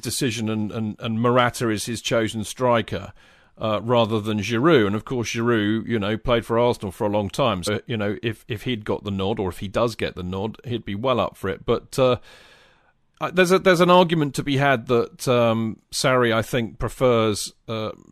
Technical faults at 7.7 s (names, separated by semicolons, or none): damaged data in a compressed stream